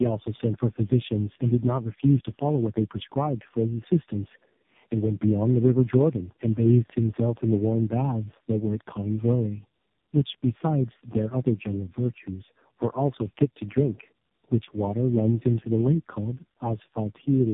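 From start to finish the speech carries tandem speech coding damage: it sounds as if it passed through a low-rate mobile codec several times, which fits three AMR-NB stages linked by G.711 transcoding. Each re-encode works on artefacts left by the previous one, so the errors stack. The result is rough, muffled and warbly, with a hard band limit leaving nothing above 3.7 kHz.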